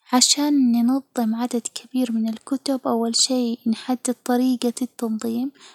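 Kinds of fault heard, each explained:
No technical faults heard.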